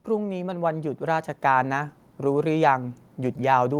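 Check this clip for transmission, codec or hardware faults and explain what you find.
One fault is present. From 0.06 to 1.99 s, automatic gain rising: the gain control, finding the input too quiet, ramps up by about 8 dB, so the speech and background noise swell together. The waveform envelope widens steadily and the spectrogram brightens evenly across all frequencies.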